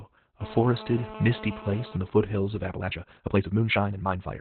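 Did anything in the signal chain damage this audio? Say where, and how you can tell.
Yes. The codec stage damaged the whole clip. Nothing sounds above about 4 kHz, so the audio is narrowband. The speech is muffled, hoarse and slightly robotic. This fits Opus voice compression in SILK mode at a very low bitrate, around 8 kbps, with coarsely coded excitation.

From 2.69 s, right after "the foothills of", to the end, the pace jumps to 1.74 times normal while pitch holds steady. It sounds rushed. This is a time-stretched section, likely from software dropping short pieces to squeeze the audio to fit a length.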